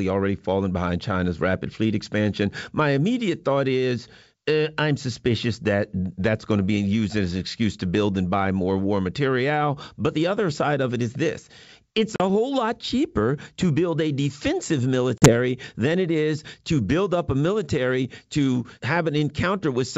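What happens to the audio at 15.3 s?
A hard-edged silent gap opens within 15.18 to 15.33 s, after "to build a defensive", and slightly distorted speech returns before "than it is to". This is packet loss on an ADPCM call. About 40 ms of audio went missing, which fits a couple of lost packets. The hole was filled with silence, and the decoder's adaptive step size then needed a moment to fall back into step with the sender.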